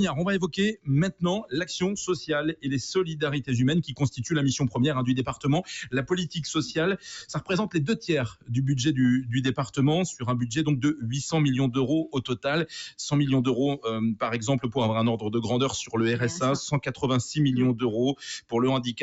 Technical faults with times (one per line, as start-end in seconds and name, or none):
0.00-19.02 noise suppressor applied to music or sounds
0.74-0.89 sound cut by the noise suppressor
3.83-4.19 sound cut by the noise suppressor
6.97-7.50 sound cut by the noise suppressor
8.29-8.50 sound cut by the noise suppressor
16.88-17.03 sound cut by the noise suppressor